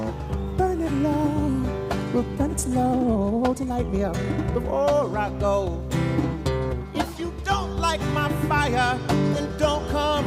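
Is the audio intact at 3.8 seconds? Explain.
No. At 3.8 seconds the audio sits inside a time-stretched section running from 2.31 to 4.73 s. It is sped up by a factor of about 1.53 with pitch unchanged, likely from software dropping short slices to shorten it, so the pace jumps and sounds rushed.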